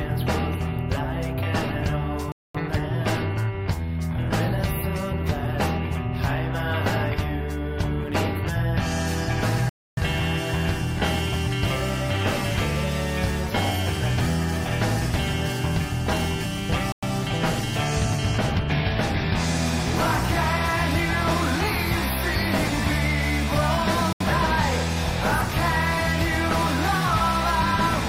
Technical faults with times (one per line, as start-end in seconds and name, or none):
2.32-2.55 Bluetooth stall
9.69-9.97 Bluetooth stall
16.92-17.03 Bluetooth stall
24.13-24.20 Bluetooth stall